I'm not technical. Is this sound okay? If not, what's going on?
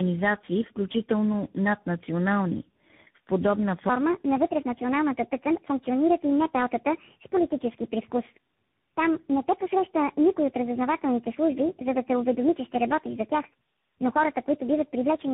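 No. Throughout, the speech sounds muffled, rough and warbly, with nothing above 3.8 kHz. That's tandem speech coding: the call passed through three different speech codecs in a row, each degrading the last.

From 3.89 s to the end, the voice plays 1.36 times too fast and about five semitones higher. That's a section at the wrong speed, likely from playback on a mismatched clock.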